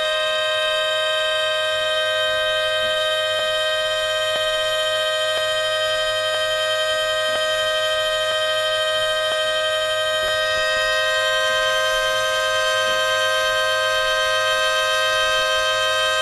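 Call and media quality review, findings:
A tiny skip in the sound, roughly once a second: 3.39, 4.36, 5.38, 6.35, 7.36, 8.32, 9.32 and 10.28 s. Each gap is about 30 to 40 ms. Probable component: stream segmenter or player reassembly. Mechanism is overlap between stream segments. Timestamps of consecutive 1.0 s segments overlap, so the player discards the overlap as a duplicate even though that audio wasn't doubled. The lost sound leaves a waveform jump at each of these segment boundaries.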